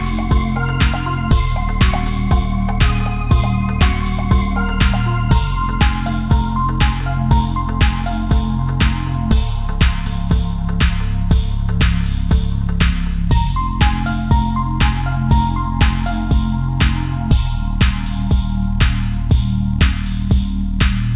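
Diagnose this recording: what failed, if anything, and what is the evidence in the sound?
Nothing stood out on listening; the sound carries the narrow, telephone-style band of a call path, with nothing above 4 kHz, and no faults could be heard.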